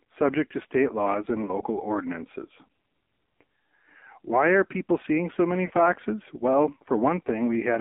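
Speech heard through an AMR narrowband mobile codec, with heavy damage pointing to a bitrate near 5.9 kbps; nothing passes above about 3.6 kHz or below 250 Hz, and the voice sounds buzzy and synthetic rather than just muffled like a plain band-limit. Lost AMR speech frames appear at 1.46 s, a single 20 ms frame giving a brief dip or warble, and at 5.66 to 5.72 s, two frames (40 ms) drawn out with fading gain, unlike a dropout's hard silence.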